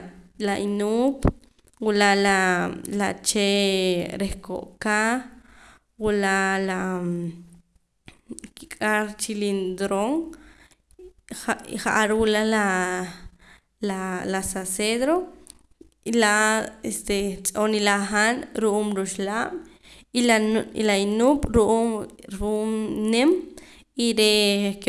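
Resampler restarted on every block is present throughout. The 48 kHz to 24 kHz conversion ran on each 40 ms block separately, leaving a small error at every block edge. The result is a 25 Hz ticking buzz under the speech that drops out in pauses.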